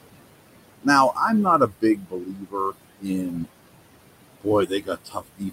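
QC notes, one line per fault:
Throughout: noise suppressor artifacts. Background is pulled down about 21 dB between phrases, and the noise rises again under the speech.
1.58–3.48 s and 4.67–5.52 s: speech cut by the noise suppressor. Quiet speech mistaken for noise is dropped about 20–22 dB, roughly a second in the first span, sounding swallowed.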